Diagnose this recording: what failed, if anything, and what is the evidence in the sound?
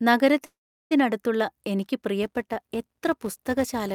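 Call audio freeze, 0.45 to 0.93 s, most likely at the network stage. The speech stops and is stretched over a pause of about 0.45 s: a brief fading continuation of the last sound, then roughly 0.38 s of near silence. It resumes exactly where it left off, with nothing skipped, so everything after it runs about 0.45 s late. That pattern points to packets held up in transit, draining the jitter buffer until the receiver had only concealment to play.

Filter restarted on every block, from 2.23 s to the end, in the processing stage. A steady buzz at 172 Hz rides on the speech and rises and falls with its level. That is the sound of a filter whose memory is cleared at every block boundary, so each block opens with a small transient. The 172 Hz repetition rate fits a 256-sample block at 44.1 kHz.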